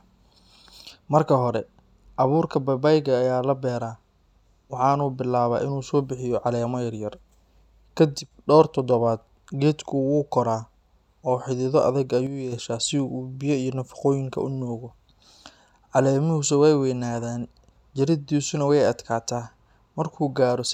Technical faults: one channel drops out

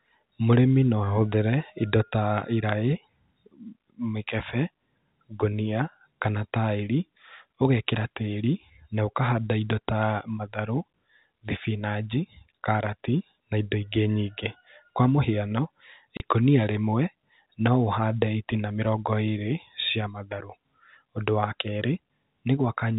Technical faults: packet loss filled with silence

